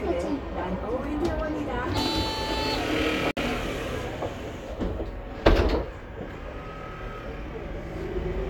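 At 3.31 s the sound drops out for about 59 ms, resuming at 3.37 s: a gap at a join of encoded pieces. Two separately encoded segments were butted together without trimming, so the first segment's padded final frame and the next segment's encoder start-up delay both remain as dead air. It is heard as a brief hole with softened edges, after which the sound picks up exactly where it left off. On a waveform it shows as a flat stretch; a spectrogram shows a narrow vertical blank band across all frequencies.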